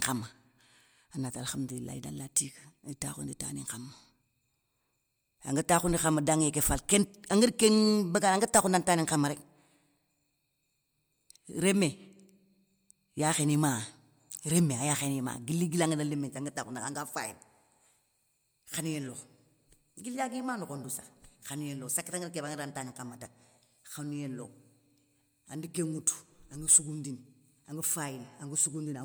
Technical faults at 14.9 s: none

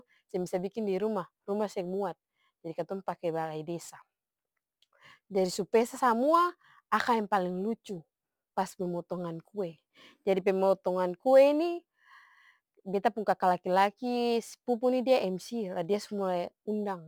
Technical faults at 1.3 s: crude rate conversion

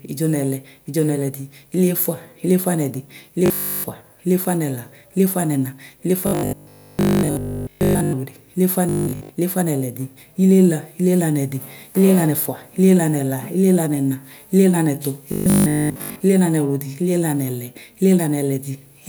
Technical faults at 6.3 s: robotic sound from repeated short buffers

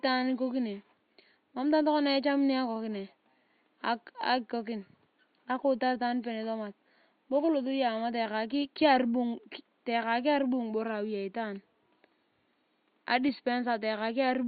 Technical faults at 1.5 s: none

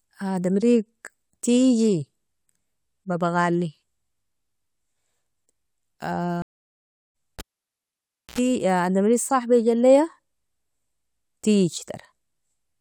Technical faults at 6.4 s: stream reconnect

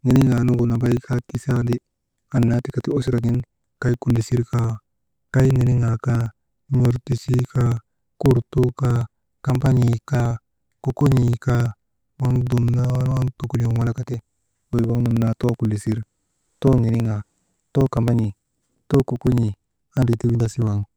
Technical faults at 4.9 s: periodic USB or driver dropouts

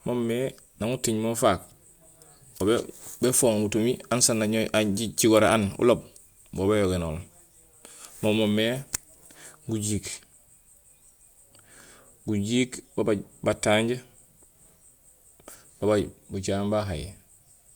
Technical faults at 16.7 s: none

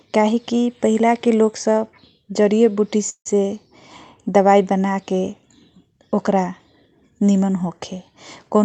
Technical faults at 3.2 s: call audio freeze

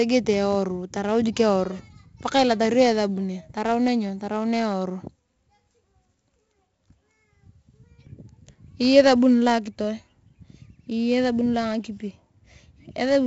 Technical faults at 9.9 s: 4-bit ADPCM compression

